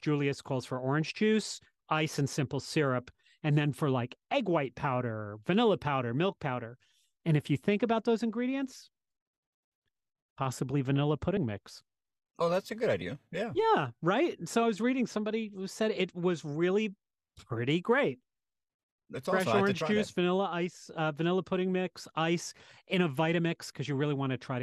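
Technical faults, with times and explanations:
11.37 s and 13.01 s, compressed frames skipped: just after "possibly vanilla" and again after "that's a good", the speech jumps ahead by about one 26.1 ms frame of encoded audio that was never decoded. The overlap between neighbouring frames smears each join into a short blip, not a sharp click.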